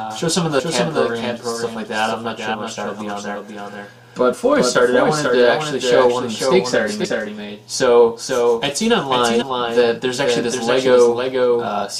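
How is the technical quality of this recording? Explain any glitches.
The recording has two technical faults: a constant doubled audio track and repeated skipped compressed frames.

Throughout, the sound has a clean, full-band echo about half a second behind, only a few dB quieter, with no room colour. This is likely a doubled audio track from a second, slower capture path.

At 0.58, 2.53, 4.32, 7.04 and 9.41 s, the audio jumps ahead by roughly 70 to 100 ms. These are compressed frames skipped, consistent with frames of about 23 ms.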